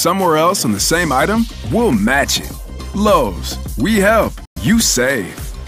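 From 4.45 to 4.57 s the sound cuts abruptly to silence, likely a Bluetooth dropout. Unlike a stall, it resumes further on, not where it stopped.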